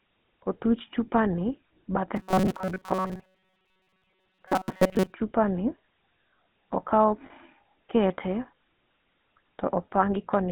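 Speech heard through a GSM full-rate codec from start to finish, confined to roughly 150 Hz–3.5 kHz, with a plainly audible buzzy, gravelly roughness consistent with about 13 kbps. From 2.16 to 5.14 s the voice becomes a rigid metallic buzz near 188 Hz, likely robotic sound from repeated short buffers, each about 5.3 ms long, replacing most of the real audio. At 7.26–7.31 s a 40 ms rough, ringing hold marks lost GSM frames, consistent with two frames concealed by repeating the last good one.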